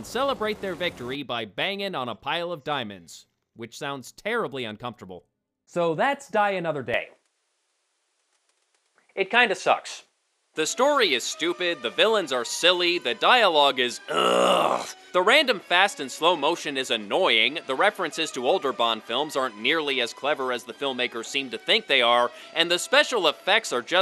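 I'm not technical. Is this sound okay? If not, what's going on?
No. At about 6.94 s the sound suddenly gets a bit duller, with nothing above about 11.9 kHz, and stays that way to the end. The level shifts a little and a faint new background hiss appears. The likely cause is an input switched to a poorer device partway through.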